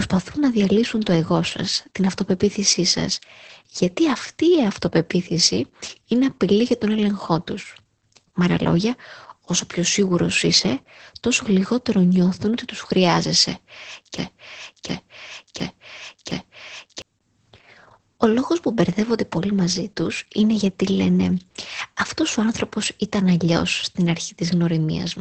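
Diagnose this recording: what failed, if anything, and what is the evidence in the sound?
The codec is the first culprit. The whole take has Opus voice compression damage, with the band stopping dead around 8.5 kHz and the speech sounding muffled, hoarse and a bit robotic. That's SILK running in wideband mode with a very coarse excitation, which points to a bitrate down around 10 kbps. At that rate the linear-prediction coder only keeps the rough spectral envelope, so the fine texture of the voice gets smeared.

The second problem is a broken-record loop from 14.18 to 17.02 s, just after "ότι τους χρειάζεσαι και". A 0.71 s piece plays four times back to back, identical each pass, and whatever should have come next in those seconds is gone. That's most likely a stall in the playback or streaming buffer, where the stage froze and kept resending the last fragment it held until the data started flowing again.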